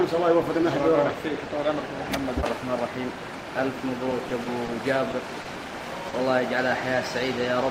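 Between 4.10 and 4.69 s, packets arrived late or more slowly than playback consumed them, so the jitter buffer ran dry four separate times. Each time the receiver extended the last bit of audio to cover the gap, 60 ms in all, about a tenth of that stretch, with the longest hold 30 ms. Nothing is lost, but the passage stutters and drags. These are repeated stalls, the classic stutter pattern.

Three further single packets came in late after that, each a short stall from a late packet. At 5.11 to 5.14 s the delay jumped by 20 ms, at 5.41 to 5.46 s by 40 ms, and at 6.08 to 6.14 s by 50 ms. Each time the buffer emptied and the receiver held the preceding sound for that long before resuming exactly where it left off. No audio goes missing. Instead, a sound lingers unnaturally, with a slight buzz or dip.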